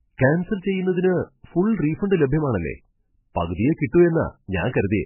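From start to finish the speech carries heavy damage that is most likely MP3 compression, starved hard enough to fit a very low rate, around 8 kbps. Nothing survives above 3 kHz, so the top end is simply gone and everything sounds dull and boxed in. With so few bits, the encoder keeps dropping weaker frequency detail and bringing it back frame by frame, giving that watery, swirling texture and softened consonant edges.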